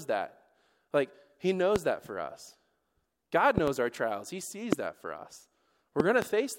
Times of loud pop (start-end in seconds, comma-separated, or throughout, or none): 1.76-1.78, 3.58-3.70, 4.73-4.75, 6.00-6.24